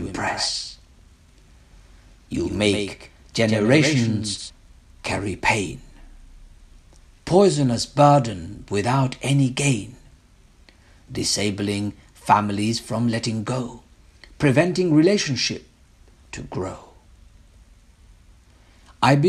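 From the first moment until 4.5 s, a doubled audio track is heard. A second full-band copy trails the original by about 150 ms. It sits about 5 dB lower, with no decay or room colour. It likely comes from a second, slower capture path. At 4.5 s it stops abruptly.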